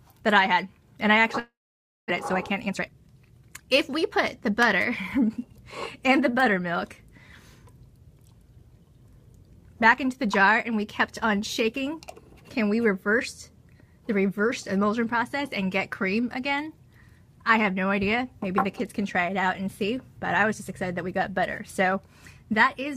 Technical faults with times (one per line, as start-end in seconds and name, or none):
1.39-2.12 long network dropout
2.51-4.50 jitter buffer speed-up